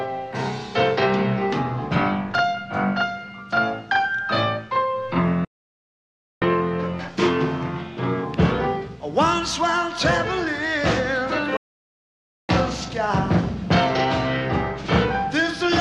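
A playback stall at 5.45 s cuts the sound off mid-flow into silence for about 0.97 s, and a second at 11.57 s lasts about 0.92 s. The player most likely ran short of data or was blocked, resuming each time once it recovered.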